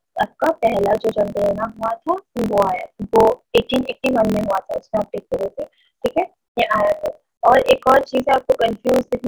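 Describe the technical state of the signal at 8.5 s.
At 8.5 s the signal still carries the block size mismatch (truncated) fault. It runs through the whole clip, not just this moment. One stage writes longer blocks than the next stage takes in, so the tail of every block is dropped. The result is a steady buzz at 43.1 Hz, which fits a 1024-sample read. The audio also plays 1.12 times too fast, while the timbre stays.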